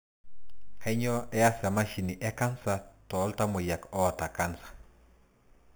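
Speech, with imaging from sample-and-hold upsampling throughout. The audio was raised from 8 kHz to 44.1 kHz by repeating samples without smoothing. Mirrored spectrum copies, the first between 4 and 8 kHz at about −16 dB, add a metallic fizz that tracks the speech.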